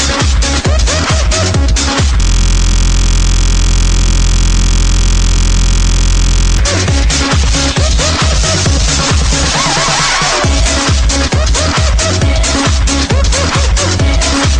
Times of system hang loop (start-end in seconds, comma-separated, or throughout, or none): 2.21-6.58